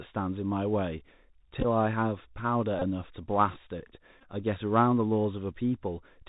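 The whole clip passed through a Bluetooth CVSD headset codec. The link is a narrowband one that sends a single up-or-down bit per sample, which fits CVSD at 64 kbps. Its adaptive step cannot keep pace with loud, bright passages, so the codec damage is plainly audible. Everything above 4 kHz is gone, s sounds come out scratchy, and a grainy hiss sits beneath the speech.

At 1.61 to 1.66 s the Bluetooth headset packet was repeated. Packets were lost and the chip decoded the previous packet again, covering 26.2 ms spread over 37.5 ms, which fits about seven lost packets. The longest stretch of repeats runs around 15 ms. Each repeat recurs every 3.75 ms, so the sound turns into a brief buzz near 267 Hz.

The same failure recurs at 2.79 to 2.83 s, with 22.5 ms replaced, which points to about six packets. It happens again at 4.20 to 4.24 s, with 30.0 ms lost across 45.0 ms, which suggests about eight packets, and runs of around 15 ms. 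Each of these events gives a short buzzy patch.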